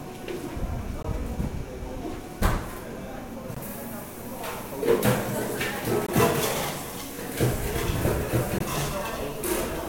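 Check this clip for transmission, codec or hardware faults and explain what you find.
Four brief, hard-edged dropouts break the sound at 1.03–1.05 s, 3.55–3.57 s, 6.07–6.09 s and 8.59–8.61 s. Each is a clean 20 ms hole, recurring at a steady rhythm. This is a gap between chunks. The audio was handled in 2.5 s blocks, and silence was inserted at each join, likely from codec padding or a player starting each block late. Nothing is missing, but the flow is interrupted at every boundary.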